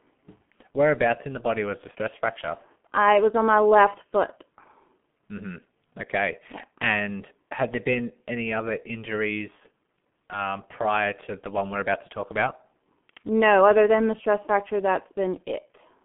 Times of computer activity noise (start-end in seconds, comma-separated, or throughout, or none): none